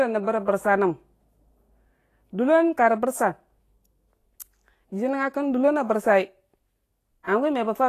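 Right from the start the speech carries a hissy, grainy sheen, and nothing reaches above 14.2 kHz. That combination is likely Vorbis compression, and the damage is plainly audible. The sound points to a fairly starved bitrate, something like 34 kbps. At that rate the encoder keeps the broad spectral shape but rounds the upper detail so coarsely that it turns into noise, which roughens the tone and dulls the edges of consonants.

Near the end, from 7.23 to 7.27 s, there's a pre-echo: a short smear of hiss about 43 ms long sitting just ahead of a sharp onset. That happens because the codec spreads its error across the whole transform block. The noise budget meant for the loud attack leaks back into the quiet gap before it, so the onset comes across softened instead of crisp.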